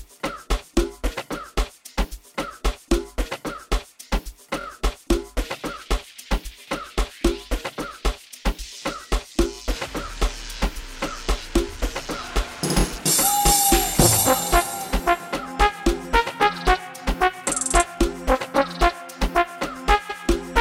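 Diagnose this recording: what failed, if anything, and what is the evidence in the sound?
Stutters at 4.60, 9.55 and 12.80 s, then a 0.14 s repeat at 20.09 s: repeated frames, with 23 ms codec frames stored more than once and replayed.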